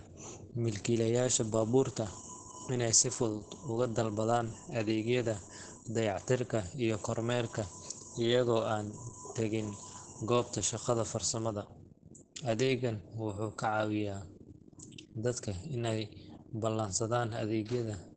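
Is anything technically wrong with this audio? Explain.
Yes. Opus voice compression affects the whole speech clip. The SILK linear-prediction coder has coded it coarsely, and nothing is heard above 9 kHz. The voice sounds muffled, hoarse and slightly robotic. The damage is heavy, which fits a bitrate of about 10 kbps.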